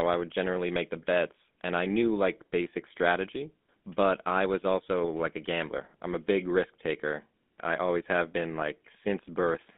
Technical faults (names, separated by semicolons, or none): GSM full-rate codec